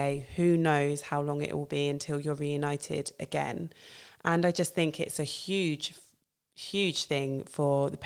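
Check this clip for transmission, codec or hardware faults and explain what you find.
No transmission, codec or hardware faults.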